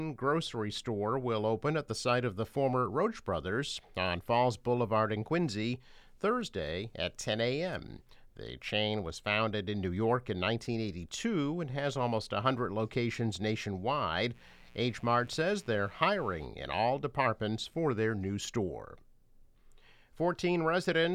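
Switching spikes from an unshielded or dimmer-fed 60 Hz supply leak in from 14.32 to 16.49 s, producing a steady, raspy mains buzz roughly 30 dB below the audio.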